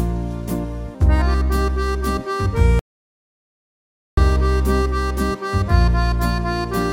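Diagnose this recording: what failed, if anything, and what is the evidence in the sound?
An audio dropout to silence runs from 2.79 s to 4.17 s, erasing about 1.38 s. The sound cuts off abruptly and resumes mid-flow, with no room tone in between. The waveform shows a flat line and the spectrogram a blank band. The input side likely failed, such as a lost device or link, while the recorder kept writing zeros.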